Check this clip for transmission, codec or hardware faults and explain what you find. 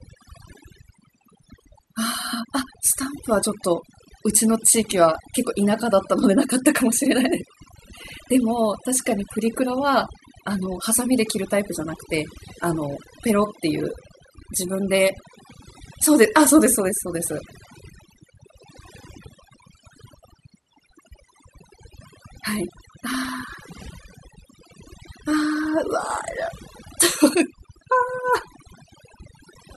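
Overdone noise removal runs through the whole speech recording, from start to finish. A noise reduction stage was pushed too hard: wherever a frequency band sat close to its estimate of the background noise, it pulled that band far down or cut it entirely, taking the softer parts of the voice along with the noise. The gaps between phrases drop to near silence scattered with twinkling specks.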